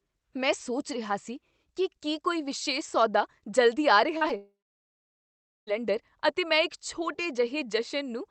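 A speech recording carried over a call link, with trouble clustered just past the four-second mark. Three bursts of short concealed packet loss come in quick succession: 4.17 to 4.23 s, 4.23 to 4.26 s and 4.28 to 4.31 s, each a few hundredths of a second where the decoder had nothing and stretched the preceding sound to bridge the gap. They come across as a quick smear and wobble rather than clean speech. Almost immediately after, from 4.37 to 5.69 s, the audio drops out for about 1.3 s. The last sound is carried on as a fading buzz or hiss for roughly a sixth of a second, then there is about 1.14 s of silence before speech resumes further along with that stretch simply gone. This is most likely a long network dropout, where nothing arrived for well over a second and concealment gave up. Throughout, the top end stops around 8 kHz, which fits an Opus call codec running in wideband mode.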